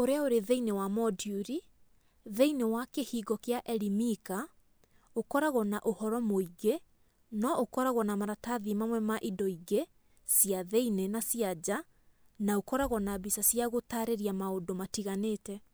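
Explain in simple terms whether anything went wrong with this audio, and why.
Nothing went wrong; the speech has no audible faults.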